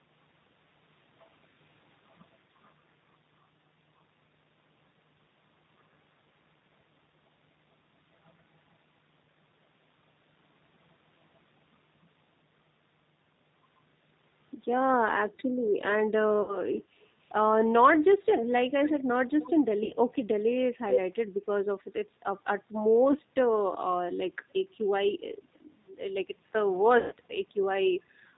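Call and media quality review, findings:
G.729 codec, whole clip: rough, slightly synthetic speech with nothing above 4 kHz, dull. Cause is G.729A at 8 kbit/s. Each 10 ms frame is rebuilt from a vocal tract filter, pitch predictor and a few pulses, so fine detail and the upper band are discarded and the harshness is plainly audible.

VoIP packet loss concealed by the speech codec: brief buzzy or noisy, stretched sound fading out, then weak, distorted speech recovering. Occurs at 16.42–16.58 s (60 ms lost), 19.84–19.94 s (60 ms), 23.12–23.18 s (30 ms) and 26.99–27.13 s (120 ms, longest). Durations fit runs of one to four lost 30 ms packets. The decoder extrapolates from its last pitch and filter with falling gain, and later frames build on that state, so damage outlasts the gap.

Echo leak: short, delayed copies of the speech returning about 270–280 ms late. At 17.21–17.31 s it is very faint. 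At 18.83–18.93 s and 19.40–19.52 s it is about 15 dB under the speech. At 20.89–20.99 s it is roughly as loud as the speech. Likely a loudspeaker on one side with an echo canceller that failed to remove what the microphone picked up, sending the residue back.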